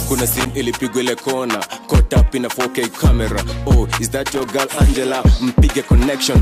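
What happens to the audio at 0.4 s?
Loose connector crackle runs from 0.32 to 0.50 s, an irregular burst of scratchy crackle. A worn or dirty contact in the signal path is making and breaking intermittently, chopping the audio into fragments, and any DC on the line adds pops.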